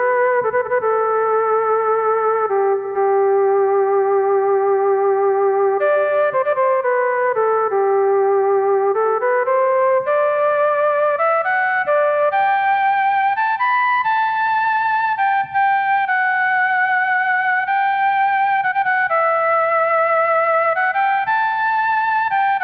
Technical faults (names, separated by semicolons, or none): none